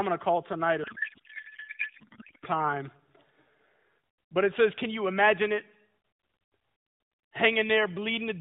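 Throughout the clip, one stage writes longer blocks than the next reads, so the tail of every block is discarded. This block size mismatch (truncated) leaves a steady buzz at 46.9 Hz, which fits 1024-sample blocks, while the speech keeps its normal speed and pitch.

From 0.84 to 2.46 s, just after "to call tonight a", sender and receiver disagree on how the AMR bits are packed, with octet-aligned frames read as bandwidth-efficient. The codec payload misread replaces the speech with garbled noise and warble that barely tracks it, while the lightly coded AMR narrowband sound around it remains limited to 4 kHz.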